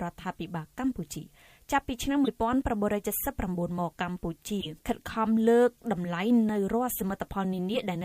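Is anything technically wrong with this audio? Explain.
Yes. There are three corrupt frame decoded events, at 2.25 to 2.28 s, 4.60 to 4.66 s and 7.74 to 7.79 s. In each, damaged bits in a compressed frame were played through anyway. The decoder misread gains or codes and placed energy at wrong frequencies. The first glitch lasts about 36 ms, which fits one frame. The later two last about 55 to 60 ms, roughly two frames each. Each is a brief foreign blip, the first peaking around -15 dBFS and the others around -20 dBFS.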